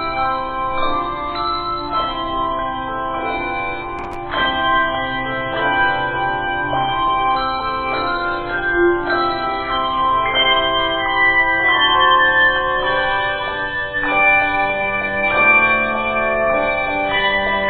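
Processor overload crackle runs from 3.99 to 4.16 s, a burst of gritty tearing laid over the sound for under a fifth of a second. The processor fell behind and missed around ten audio deadlines in quick succession. Each time, a stretch of old audio was played again in place of the fresh buffer, leaving hard-edged splices. Each held piece was a short buffer of roughly 5 ms, and the crackle stops once the load passes.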